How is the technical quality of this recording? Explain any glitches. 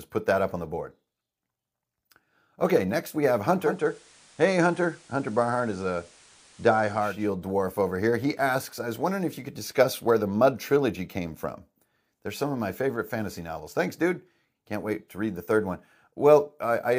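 One glitch stands out. From 3.53 to 7.34 s, after "next we have" and until "dwarf over here", the radio blends from digital to analogue FM over about 0.45 s and back. A spectrogram shows a hiss floor roughly 30 dB below the speech, with the waveform about 1 dB lower.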